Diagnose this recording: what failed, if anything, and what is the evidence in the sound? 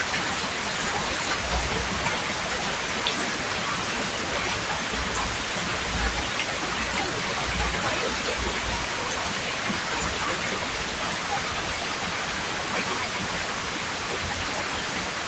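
At 9.54 s the sound jumps forward with no silent gap, and around 15 ms of audio is missing. This points to the driver or buffer stage, most likely a dropped buffer (overrun). The capture software did not read a block of samples before the hardware overwrote it, so the audio on either side of the lost block was joined directly. The call path can be heard as a high-frequency cutoff near 8 kHz, consistent with Opus at about 32 kbps.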